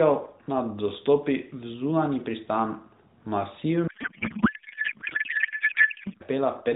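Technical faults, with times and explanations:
3.88–6.23 s: codec payload misread. The AMR speech, narrowband and lightly coloured before this, turns into garbled warble and noise that barely tracks it. The likely cause is octet-aligned frames being unpacked as bandwidth-efficient. Unlike packet loss, there are no gaps.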